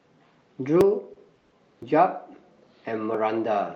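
At 0.81 s a small forward jump lands in the speech, roughly 30 ms of sound skipped with no silence between the joined sides. This is likely a dropped buffer (overrun), where the hardware overwrote samples before the program collected them.

From 1.13 to 1.17 s, and again from 1.35 to 1.39 s, a sound is held slightly too long with a faint buzz or dip. Each is a short stall from a late packet: the jitter buffer emptied, the receiver stretched the last sound for 20 ms, and nothing was lost.

Straight after, from 1.39 to 1.54 s, the sound hangs as a fading buzz or hiss for 130 ms and then resumes where it stopped, inserting a gap without skipping anything. This is likely a call audio freeze, with delayed packets leaving the jitter buffer empty.

At 1.83 s a second slight jump, about 20 ms skipped, likely marks another dropped buffer.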